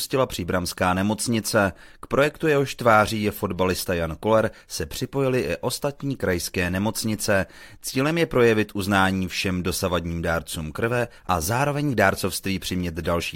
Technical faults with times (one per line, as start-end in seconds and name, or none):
none